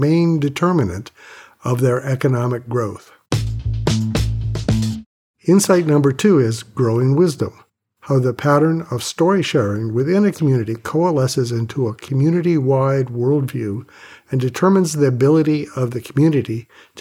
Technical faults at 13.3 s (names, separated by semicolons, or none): none